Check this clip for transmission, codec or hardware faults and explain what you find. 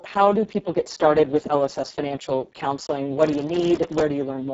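Two faults are present: heavy Speex codec damage across the whole clip, and a burst of processor overload crackle near the end.

Speex codec, throughout: the speech was encoded with Speex at a very low setting, consistent with a bitrate near 6 kbps. With so few bits, the excitation signal is only roughly modelled, so the voice comes out hoarse, noisy and somewhat robotic. The upper band is a shaped noise fill rather than real detail, and nothing is present above 7.7 kHz.

Processor overload crackle, 3.23 to 4.03 s, just after "with lss financial counseling": the processor repeatedly failed to finish its audio buffers on time, dozens of misses in a row, each on buffers under a millisecond long. Each missed buffer was filled with a hard-edged scrap of old audio, and this run of tiny discontinuities produces gritty tearing laid over the speech for about 0.8 s before it stops.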